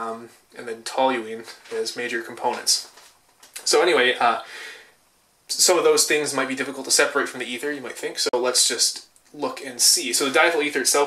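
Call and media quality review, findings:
Bluetooth dropout, 8.29–8.34 s: silent gap of about 43 ms; audio resumes further on, as if it had played through. Waveform shows a flat-line hole; spectrogram shows a full-band vertical blank. Likely wireless link packet loss, fitting about two dropped packets.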